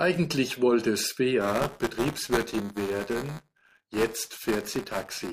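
The program filling the playback ring buffer and the hardware draining it have slipped out of step in this speech clip. From 1.41 s to the end they cross within each period, so buffer tearing sets in. A small slice of every roughly 5 ms buffer replays audio from about 15 ms earlier, with hard joins either side. This produces a continuous robotic buzz at 200 Hz riding on the speech.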